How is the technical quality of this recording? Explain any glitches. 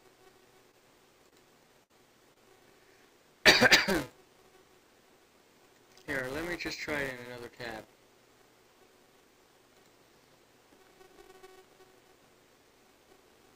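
The recording is impaired by a steady buzz and by several dropouts early on.

Throughout, a filter restarted on every block adds a faint tick each block, which fits 128-sample blocks. The ticks fuse into a 375 Hz buzz that follows the level. On a spectrogram it shows as harmonic lines at multiples of 375 Hz.

At 0.71–0.75 s, 1.29–1.34 s and 2.33–2.38 s, short concealed packet loss fills roughly 20 ms holes by extending the preceding sound. Each is heard as a brief smear or wobble and appears as a short smoothed patch in the waveform.

At 1.84–1.91 s, a burst of packet loss drops about 60 ms. The gap is filled with a held, fading continuation, and the audio then resumes further on. On a spectrogram this is a smeared band that tails off before the real signal returns.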